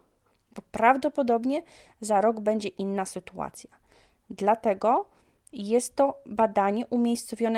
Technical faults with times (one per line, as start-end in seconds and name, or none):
none